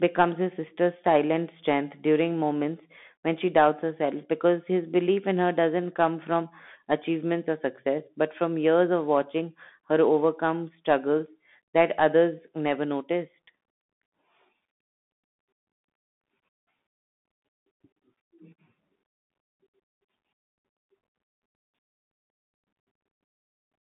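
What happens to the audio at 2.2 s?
At 2.2 s the speech is running through the Bluetooth CVSD headset codec, which colours the whole clip. CVSD sends one bit per sample, up or down, with an adapting step size, which fits a 64 kbps link. The sound is narrowband, about 150 Hz to 3.6 kHz, with scratchy s sounds and a granular hiss. On a spectrogram, everything stops flat near 3.8 kHz. The waveform carries a fine grainy noise floor beneath the speech.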